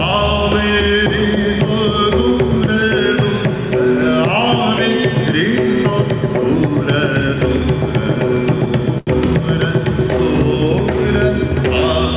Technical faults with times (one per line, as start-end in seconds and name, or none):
8.98-9.09 short stall from a late packet